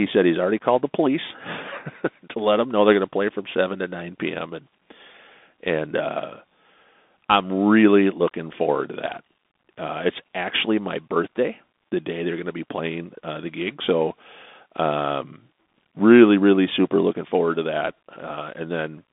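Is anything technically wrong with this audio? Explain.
Yes. Throughout the speech, the sound is thin and boxed-in, with nothing below about 200 Hz or above about 3.6 kHz, and a grainy, gritty texture. This is the Bluetooth CVSD headset codec. It sends one up-or-down bit per sample, which fits a 64 kbps link, with an adapting step size that cannot track fast changes cleanly.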